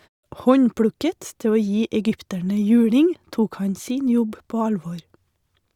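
Nothing goes wrong anywhere in this bit of speech, so there's no fault to point to.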